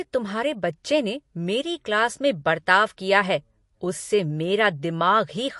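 From start to finish the speech has a watery, swirling texture, and nothing is heard above 11.2 kHz, so the top end sounds dull and boxed in. This is likely MP3 compression, with damage plain enough to fit a low bitrate around 48 kbps. Short of bits, the encoder cut off the treble at a fixed frequency and zeroed weaker frequency lines, which flicker on and off between frames and make the sound swirl.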